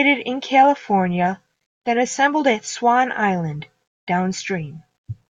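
No technical faults can be heard anywhere in the speech. Nothing in the audio marks a point where the signal chain went wrong.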